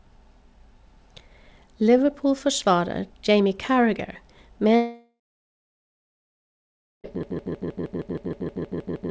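At 4.76 s the speech cuts out until 7.07 s, most likely a long network dropout. The receiver smears the last sound into a fading buzz for a few tenths of a second, then it's near silence for roughly 1.9 s, and that stretch never comes back.

From 7.23 s to the end there's a broken-record loop: a 157 ms fragment repeating back to back, likely because the stream stalled and kept resending what it held. The speech that should be there is gone, and like everything here it's band-limited to 8 kHz by the G.722 call path.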